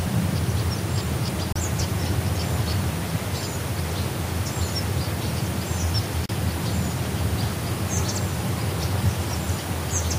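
The clip is sound assembled from separately encoded pieces that were joined without trimming the encoder's start-up delay and last-frame padding, producing a gap at a join of encoded pieces twice: at 1.53 s, lasting about 31 ms, and at 6.26 s, lasting about 36 ms. Each time the continuous sound drops into brief silence with smeared edges, then resumes exactly where it broke off.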